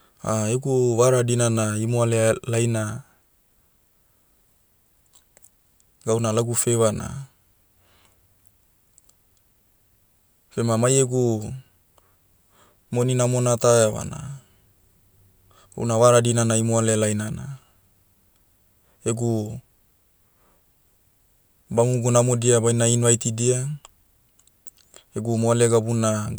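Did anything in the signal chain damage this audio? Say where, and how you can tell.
No, nothing in the signal chain has damaged this speech recording; every stage from capture to playback is carrying the signal intact.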